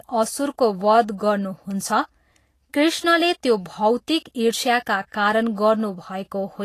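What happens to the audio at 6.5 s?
At 6.5 s the speech carries the same grainy, hissy treble heard through the whole clip, most likely from Vorbis compression at a low setting, which fits a bitrate near 35 kbps. The codec quantises the residue above its spectral floor so coarsely that fine high-frequency detail turns into noise of similar energy, roughening tones and smearing attacks. Unlike a plain low-pass filter, the band below the 14.2 kHz cut-off is noisy rather than cleanly dull.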